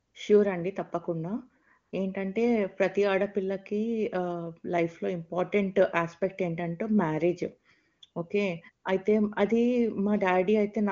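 No technical faults turn up anywhere in this speech recording, so there is nothing to place in time order.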